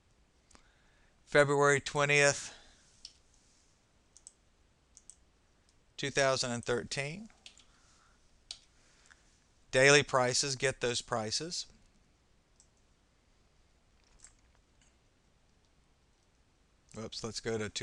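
Nothing stood out on listening; no technical faults could be heard anywhere in the audio.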